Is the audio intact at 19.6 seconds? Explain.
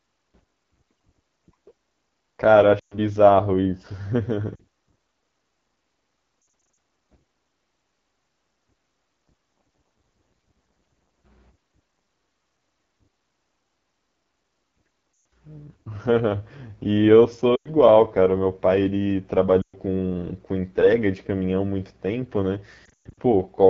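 No. From 19.62 to 19.77 s there are lost AMR speech frames. Radio errors corrupted a run of frames, and the decoder filled the gap of about 120 ms by repeating the last good pitch and vocal tract settings at falling gain. That stretch fits six 20 ms frames. The sound drops quickly to near silence within two frames. It returns weak or rough for a moment.

The whole clip also carries the AMR wideband (HD Voice) codec, and its damage is plainly audible at this point too. This speech is modelled up to 6.4 kHz from pulses driving a vocal tract filter, with shaped noise above that to 7 kHz. The rough, raspy texture points to one of the lowest rates, around 8.85 kbit/s.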